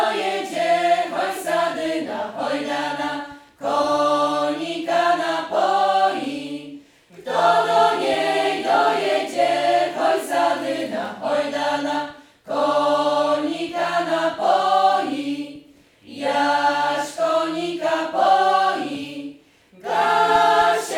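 No technical faults can be heard anywhere in the audio.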